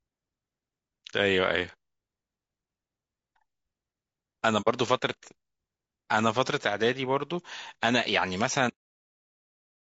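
From start to finish the speech sounds rough and grainy, with a hiss filling the gaps between the harmonics and a top band that sounds thin and somewhat synthetic. This is plainly audible damage from low-delay AAC compression, likely AAC-ELD, the low-delay AAC used for video calls. Its short frames resolve pitch harmonics poorly and need more bits to code well. The damage points to a low bitrate of around 32 kbps, too little for clean speech.

At 4.61 s the sound fades out and back in, leaving a soft-edged hole that lasts until 4.68 s. This is AAC frame loss with muting. The missing audio, about 60 ms, fits two lost frames. The decoder set their spectrum to zero, and the overlapping windows on either side smoothed the edges into a fade instead of an abrupt break.

At 8.70 s the audio stops in the middle of a sound and drops straight to digital silence, with no decay, for the rest of the clip. 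This is a cut-off end. The final buffers were never written or played, so the recording ends where the data runs out rather than where the sound finishes.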